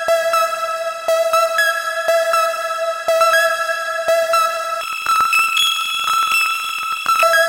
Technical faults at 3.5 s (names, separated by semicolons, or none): none